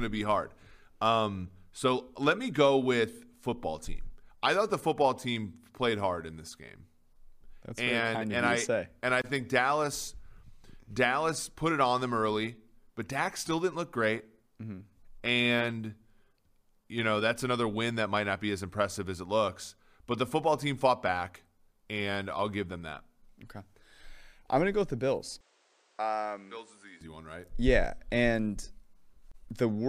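A speech recording in which, from 25.41 s to 27.01 s, the sound abruptly turns duller and drops by about 5 dB, with a new, faint background noise underneath, then recovers. This most likely comes from the input switched to a poorer device, whose narrower band stops near 9.8 kHz. On a spectrogram the energy above 9.8 kHz vanishes for that stretch as a clean horizontal ceiling. The waveform shows a lower envelope, with no gap at either switch.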